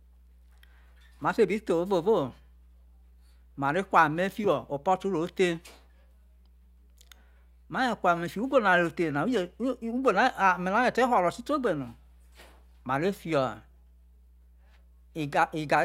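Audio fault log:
Throughout: mains hum. A steady low tone at 60 Hz sits under the speech for the whole clip, roughly 30 dB below the program level, with some energy at its low harmonics. The tone does not vary with the speech, which points to the power line coupling into the signal path through a ground loop or a nearby transformer rather than any acoustic source. Its constancy makes it most audible in pauses between phrases.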